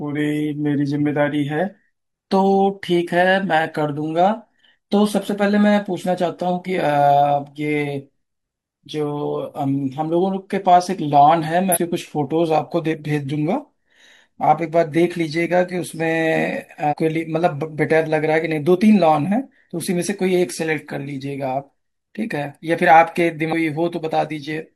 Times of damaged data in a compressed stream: 6.63-6.68, 11.71-11.78, 16.87-16.94, 23.49-23.53

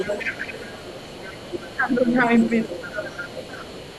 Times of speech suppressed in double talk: 1.79-2.15, 2.91-2.95

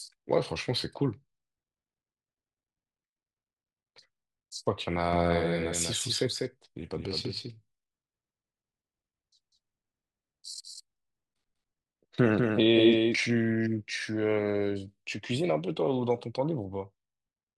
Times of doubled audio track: 5.13-13.17

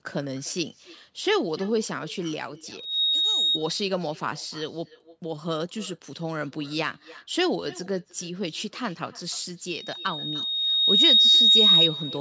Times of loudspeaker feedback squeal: 2.77-3.59

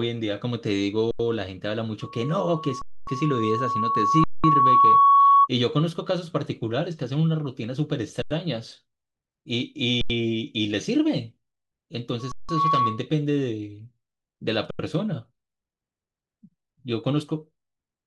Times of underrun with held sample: 1.11-1.19, 2.82-3.07, 4.24-4.44, 8.22-8.31, 10.01-10.10, 12.32-12.49, 14.71-14.79

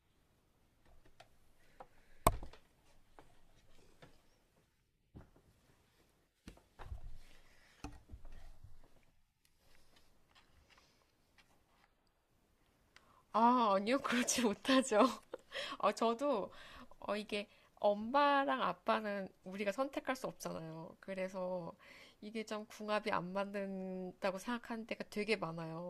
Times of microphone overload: none

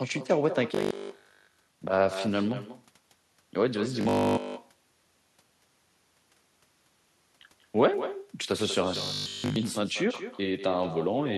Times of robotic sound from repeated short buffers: 0.75-1.79, 4.01-4.45, 8.96-9.56

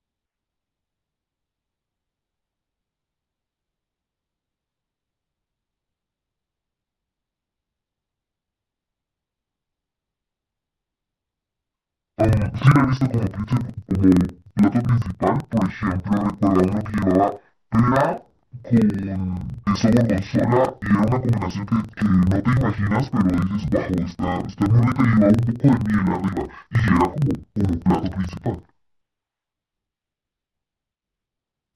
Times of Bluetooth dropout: none

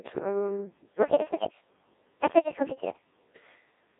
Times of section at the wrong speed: 1.02-3.25

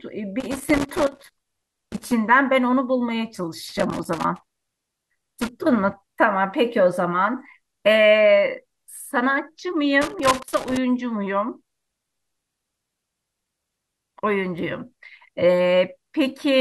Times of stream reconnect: none

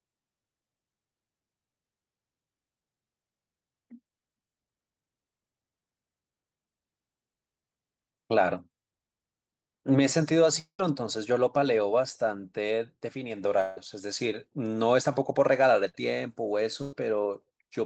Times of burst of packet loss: 15.89-15.95, 16.82-16.93

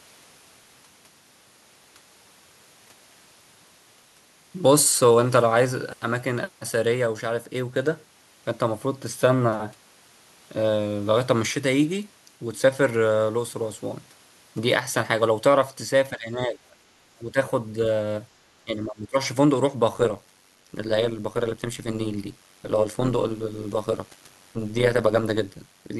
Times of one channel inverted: none

